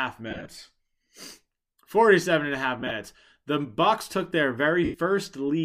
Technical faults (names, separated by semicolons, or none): lost LE Audio frames